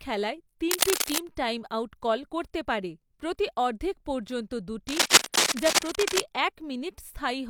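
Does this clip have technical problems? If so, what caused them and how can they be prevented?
Yes. Cable scratch noise occurs from 0.71 to 1.24 s, about as loud as the speech, and from 4.88 to 6.2 s, somewhat louder. The rough bursts likely come from a moving worn cable or connector. Its contact resistance jumps. Secure cables and replace worn ones.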